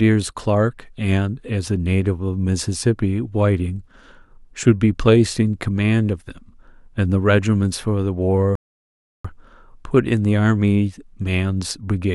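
A rebuffering stall runs from 8.55 to 9.25 s: the player exhausted its downloaded audio and halted until more data arrived. The speech drops to silence for 691 ms, then picks up exactly where it stopped, losing nothing but adding that time.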